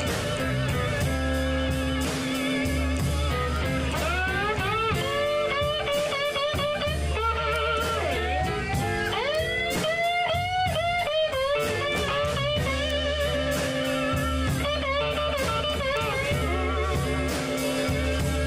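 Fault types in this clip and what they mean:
Bit error spike: a flipped bit throws one sample off by a power of two, heard as seven isolated sharp ticks of about −16 to −10 dBFS, each a one-sample needle on the waveform and a thin full-height line on the spectrogram.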